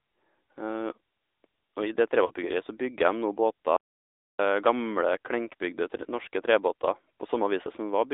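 A speech recording that has passed through the AMR narrowband mobile codec at a low bitrate (its coarseness fits roughly the 10 kbps mode), which rebuilds the voice from a vocal-tract model and a few pulses per subframe. The result is plainly audible buzzy, synthetic speech confined to a phone line band of about 300 Hz to 3.7 kHz. At 2.26 to 2.33 s, lost AMR speech frames forced the decoder to repeat its last good pitch and vocal-tract settings at falling gain, so the voice briefly smears and dips for about 40 ms, which fits two lost 20 ms frames, before returning rough for a moment. From 3.76 to 4.39 s the output drops to silence for about 0.62 s in mid-flow, most likely a playback stall where the player ran out of data or its thread was blocked, after which the speech resumes.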